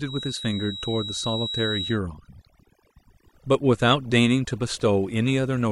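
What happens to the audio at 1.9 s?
At 1.9 s a thin, steady feedback whistle near 3.9 kHz sits well below the speech, likely from a speaker-to-microphone loop held just short of runaway; unlike full howl, it swells and fades slowly but never builds into a howl, and it stops at 2.0 s. Throughout the clip, overdone noise removal pulls bands near the noise estimate down hard, leaving near-silent gaps with twinkling specks, rather than the broadband hiss of unprocessed noise.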